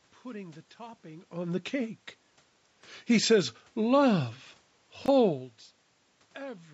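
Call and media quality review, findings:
Chunks out of order, 5.04–5.08 s: one 20 ms chunk was delivered or written a single slot late, so it played after the chunk that should follow it. Nothing is missing, but three hard joins give a brief jumbled blip.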